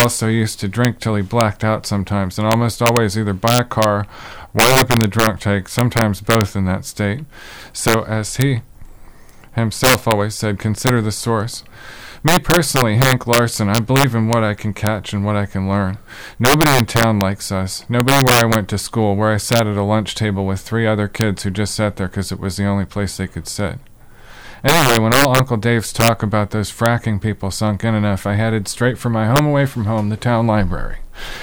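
Violent, sharp cracks break out on the loudest peaks across the whole clip, far harsher than ordinary clipping. This is integer overflow: with gain running about 5 dB too hot, the small share of samples exceeding the integer limit wrap to the opposite sign instead of being held at full scale.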